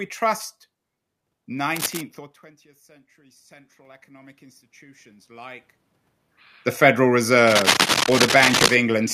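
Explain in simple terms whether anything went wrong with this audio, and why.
Two things went wrong here. The first is cable scratch noise, from 1.76 to 2.01 s and again from 7.47 to 8.76 s. You get a rough, rustly scratching laid over the speech, about as loud as the speech itself, and the second burst drags on for over a second. The likely cause is a worn cable or connector being moved, so the electrical contact keeps flickering and spraying bursts of noise into the signal.

The second is automatic gain rising, from 3.15 to 7.14 s. The input got a lot quieter, and the automatic level control responded by slowly turning itself up over those four seconds. It only made up part of the drop, and because it boosts everything it picks up, the room's background noise swells right along with the speech. The level shifts around 2.0 and 5.5 s are just the talker moving relative to the microphone, not a system fault.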